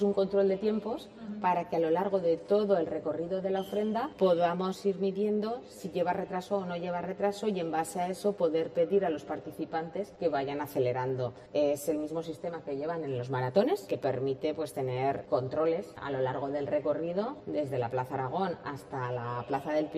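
A fixed channel delay (comb filtering) runs through the whole recording. One channel arrives around 10 ms late, and when the two are summed to mono the shared content cancels in a regular series of notches, the first near 50 Hz and the rest at roughly 100 Hz intervals. The result is a hollow, phasey colour. Unlike flanging, the notches never sweep. They stay fixed from start to finish.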